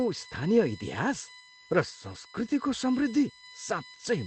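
A steady, fixed-pitch whine runs under the speech from start to finish, built on a 1 kHz tone with its strongest harmonic at 4 kHz, roughly 20 dB below the speech. This is USB whine: current pulled in 1 ms bus frames leaking into the audio through power or ground.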